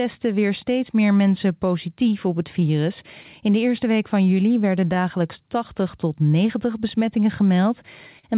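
Clock drift between sender and receiver runs through the whole clip. The sender's clock runs about 2 percent slow relative to the receiver's, so the jitter buffer keeps draining and the receiver must keep filling the gap. The tempo of the speech feels faintly uneven rather than clearly wrong. On a spectrogram this shows as a slight, irregular loosening of the time grid; separately, the G.711 band edge at 4 kHz leaves nothing above it.

Repeated timing corrections are what that drift produces between 0.33 s and 7.64 s. The receiver repeatedly stretches short pieces, playing the speech at about 98 percent speed and adding around 150 ms in total across the stretch. Each edit is tiny, heard as a soft hiccup or a barely lengthened syllable at uneven intervals. In the waveform, some pitch periods appear duplicated. In the spectrogram, harmonic tracks are momentarily drawn out.

A short stall from a late packet follows at 8.19 s to 8.25 s. 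A packet missed its slot, the buffer ran dry, and the receiver held the last sound for 42 ms until the packet arrived. It then resumed at the same point, so nothing is lost but the delay grows by 42 ms. It sounds like a brief frozen, slightly buzzy sustain. The spectrogram shows flat, smeared harmonics, and the waveform shows a repeated, slightly dipped cycle.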